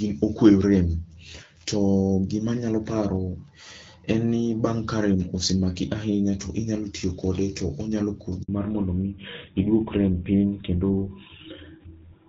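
Speech carried over a phone call. At 8.42 s a handover gap silences the sound for 60 ms. The call is switching networks, and no frames arrive during the switch. From 8.48 s to the end there is a fallback to narrowband. Everything above 4 kHz disappears, and the speech turns duller and rougher. This fits a drop from AMR wideband (HD Voice) to GSM full rate. Before the switch, the wideband codec shows only light coding damage.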